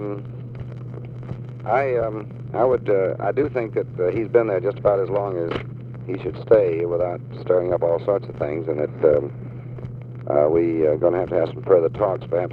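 Nothing stood out as a technical problem on listening.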